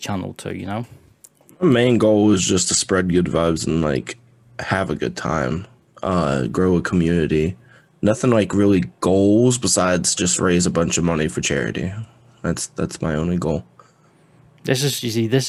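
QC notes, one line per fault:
No faults stood out on listening to the speech in this clip.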